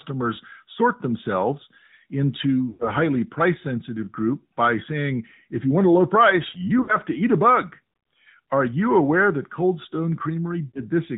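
Throughout, the AMR narrowband mobile codec is plainly audible. Nothing above 4 kHz survives, and the speech has a buzzy, synthetic edge from the pulse-driven vocal-tract model, which points to a mid-rate mode of about 10 kbps. Unlike a low-bitrate music codec, it produces no pre-echo or swishy high band, only a hard 4 kHz ceiling.

Lost AMR speech frames occur at 2.70–2.91 s, 6.82–6.97 s and 10.68–10.81 s, covering about 100 ms, 60 ms and 60 ms. The decoder stretches the last good pitch and spectral shape at falling gain, so each spot is a smeared, warbling fade rather than a clean gap or click.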